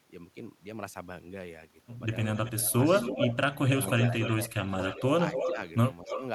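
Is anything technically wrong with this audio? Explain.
Yes, there are two faults, both starting after about 2.3 s of the speech.

From 2.35 to 6.23 s there is an echo leak: a second, delayed copy of the talker follows the original by about 272 ms, only around 5 dB quieter. The likely cause is a far end playing the call on a loudspeaker, where the echo canceller failed to remove what its microphone picked up and sent it back. On a spectrogram, each syllable's harmonic pattern repeats shifted about 0.27 s later. In the waveform, the envelopes overlap where gaps between syllables should be.

From 2.54 to 6.2 s the speech is suppressed in double talk. The level dips in pieces, by around 15 dB at the deepest, adding up to about a second in total. This is likely the echo canceller turning down its own talker along with the loudspeaker echo because it could not tell the two apart while both were active. 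The waveform shows sudden notches in the envelope within words. On a spectrogram, those same moments appear as vertical bands of reduced energy.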